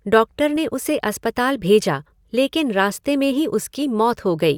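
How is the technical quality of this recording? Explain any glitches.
One short glitch mars this speech recording. At 0.56 s, just before "उसे अस्पताल भेजा लेकिन", a corrupt frame decoded: damaged bits in a few compressed frames were played anyway, scattering energy to wrong frequencies as a brief glitch peaking around -25 dBFS. Unlike a dropout, sound briefly changes character.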